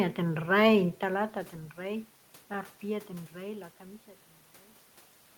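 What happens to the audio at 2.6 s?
The audio is intact at 2.6 s; the shift in level around then comes from the talker moving relative to the microphone, not from any fault in the signal chain.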